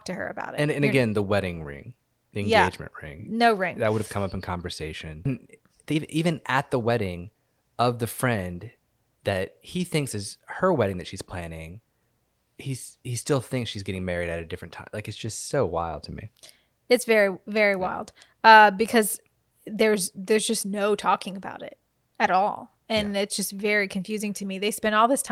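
Speech, with two faults. At 5.25 to 5.27 s a skip ahead occurs: about a second of speech is dropped, and playback jumps forward with no gap. From 5.45 to 7.54 s a jitter buffer speed-up follows. Short pitch-period pieces, about a third of a second in total, are cut out. The speech runs at 113% speed with unchanged pitch and sounds hurried.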